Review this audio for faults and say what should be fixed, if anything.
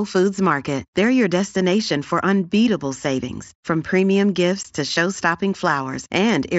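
At 4.63 s there is a 15 ms gap in the speech with abrupt edges. This is unconcealed Bluetooth headset packet loss: the gap fits two lost frames on the mSBC link between headset and phone, and the receiver filled them with silence or an idle pattern instead of concealing them. To prevent it, enable packet loss concealment on the receiving side and keep the headset close to the phone, away from radio interference.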